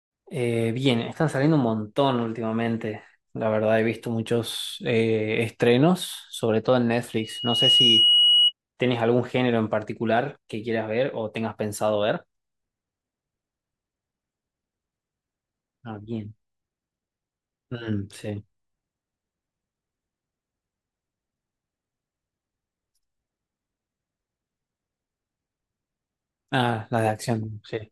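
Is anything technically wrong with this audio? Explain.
Yes. From 7.18 to 8.53 s a microphone was picking up the loudspeaker it fed, and at 2.9 kHz the loop gain went above one. The result is loudspeaker feedback squeal: a single piercing tone that swells over roughly half a second until it sits about 5 dB above the speech.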